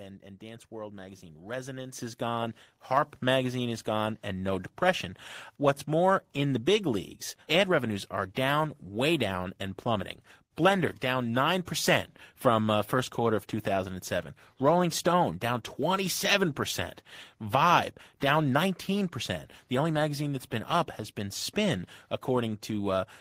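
At 1.92 s, just before "is gone", the microphone volume is stepped up by about 8 dB, and at 2.97 s, between "is gone" and "magazine is gone and", it rises again by about 3 dB. Each time the input level of the device jumps in one step, so the voice and the background noise get louder together. On a waveform the envelope widens abruptly at both points; a spectrogram shows every band brightening at once.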